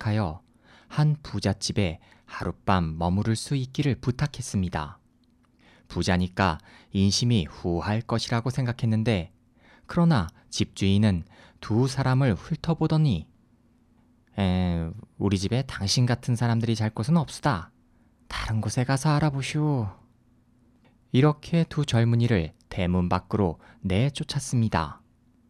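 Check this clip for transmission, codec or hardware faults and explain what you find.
No transmission, codec or hardware faults are audible anywhere in this speech recording.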